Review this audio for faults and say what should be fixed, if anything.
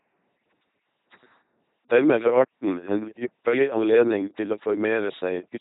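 The speech has run through an LPC-10 vocoder from start to finish, with damage that fits a 2.4 kbit/s link. A simple filter is excited by either a buzz or noise, with each moment forced fully voiced or unvoiced. The result sounds mechanical and robotic, with nothing above 3.9 kHz. To prevent this, send the audio over a modern higher-bitrate wideband codec instead of an LPC-10 channel.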